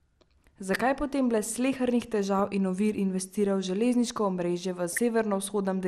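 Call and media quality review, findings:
MP2 compression, throughout: dull, band-limited speech with gurgling, granular texture. Likely MPEG Layer II coding starved of bits, consistent with roughly 80 kbps. Upper sub-bands switch off and flicker, and the remaining bands are coarsely quantised.

DAB burbling, 2.39–2.43 s, just before "in ovir investirajo v": brief burble. Residual bit errors past error correction corrupt samples, putting short noise blips in single sub-bands.

DAB burbling, 4.88–4.98 s, after "investirajo v železniško omrežje": same burble. The sparse errors, around a fifth of a percent, point to weak reception spanning a few frames.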